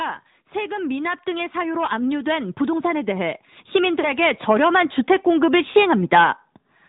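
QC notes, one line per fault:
Throughout: AMR narrowband mobile codec. Nothing above 4 kHz passes, and the speech has a plainly audible buzzy, synthetic edge, because a vocal-tract model driven by sparse pulses replaces the real waveform. The degree of damage fits a mid-rate mode of around 10 kbps.
0.52–6.4 s: automatic gain rising. The level climbs steadily by about 13 dB over nearly six seconds as the gain control, finding the input too quiet, keeps raising its gain. Voice and background noise swell together, so the rise is a slow, even lift.
3.99–4.1 s and 5.72–5.75 s: lost AMR speech frames. At 3.99 s the sound smears into a stretched, fading warble for about 0.1 s, which fits two lost 20 ms frames. At 5.72 s a shorter dip fits one lost frame. In each case the decoder repeats the last good pitch and vocal-tract settings at falling gain, and the speech comes back weak for a moment.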